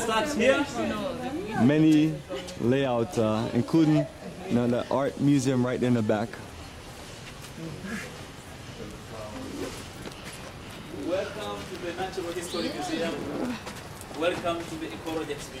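No technical faults can be heard anywhere in the signal, which holds steady from its opening moment to its close.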